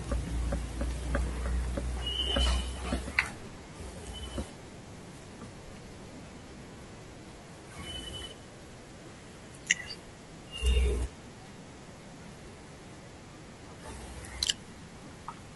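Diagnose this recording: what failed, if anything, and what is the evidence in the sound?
The codec stage is at fault: throughout the speech there is plainly audible coding damage, most likely from low-delay AAC compression of the AAC-ELD kind used in video calls. The voice sounds rough and grainy, with noise filling the gaps between pitch harmonics and a thin, synthetic-sounding top band. Each low-delay frame codes about 500 frequency lines, and at low bitrate they are quantised so coarsely that noise spreads between the harmonics, and the degree of damage fits a bitrate around 32 kbps.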